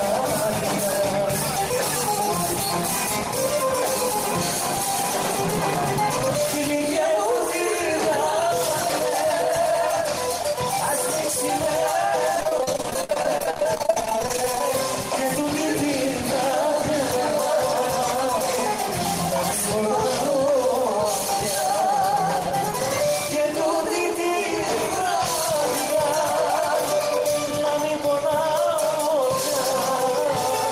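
From 12.35 to 14.61 s there is repeated packet loss (robotic sound): dozens of short dropouts, none longer than 50 ms, each patched by extending the preceding sound. With about a third of the span concealed, the audio turns choppy, with pieces missing.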